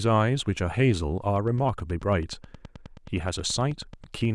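From 1.36 s to 4.26 s a train of clicks runs under the speech: roughly thirty near-identical pulses, evenly spaced at 9.34 per second and peaking at about the level of the speech, so they tick through the pauses as well as over the talking. The steady rate and uniform shape set this apart from crackle, whose pops vary in size and land at random, and point most likely to electrical interference or a faulty connection or power supply.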